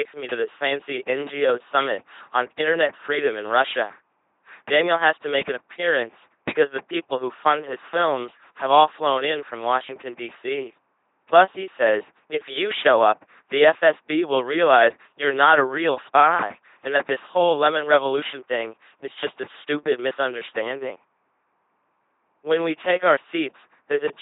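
From start to finish the speech passes through an LPC-10 vocoder. It sounds buzzing and mechanical, like a robot. Each instant is rebuilt as either pulses or noise, never a mix. A simple filter shapes that source into a rough vocal tract. Wrong voicing choices turn into stray buzz or hiss. The damage is heavy, which fits a 2.4 kbit/s stream. Nothing remains above 3.8 kHz, so the top end sounds dull.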